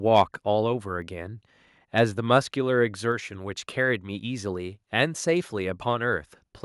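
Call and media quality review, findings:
Microphone overload, 0.16 to 0.21 s: brief harsh crackle on the loudest syllable peak. Likely cause is the mic input gain set too high, driving the converter about 2 dB past full scale and flattening the tops of a small share of samples.

It is distinct from a network crackle or codec burst because the distortion follows loudness, appearing only at the peak as a gritty buzz, with no gap, warble or smearing.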